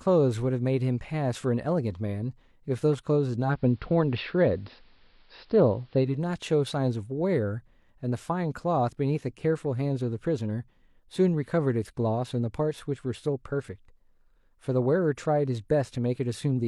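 At 3.38 s the speech shows digital radio blending to analogue: the receiver loses its digital stream and cross-fades over about 255 ms to the AM broadcast, returning at 6.21 s. During that stretch the treble is cut back, so a spectrogram shows a flat ceiling with a faint hiss floor some 40 dB down, and the waveform's envelope shifts by about 4 dB at each blend.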